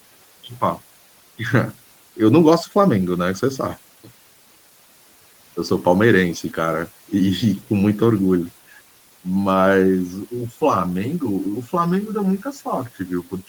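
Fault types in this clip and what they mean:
Channel delay (comb filtering): From 9.82 s to the end at 13.48 s, one channel trails the other by around 10 ms, and summing them to mono cancels evenly spaced frequencies, starting near 50 Hz. The speech turns hollow and phasey above the room noise.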